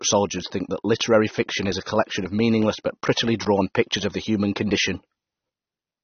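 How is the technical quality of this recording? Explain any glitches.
The quality is clearly degraded, most likely by AAC compression. Throughout, the speech sounds dull and smeared, with nothing above 6.3 kHz. That fits a low-bitrate encoder, around 24 kbps, dropping treble. Unlike a simple low-pass filter, it also leaves a warbling, fizzy texture on sustained sounds and sibilants.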